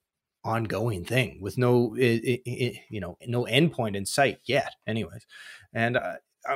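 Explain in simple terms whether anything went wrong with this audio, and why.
Listening to the speech in this recording, nothing stood out as having gone wrong.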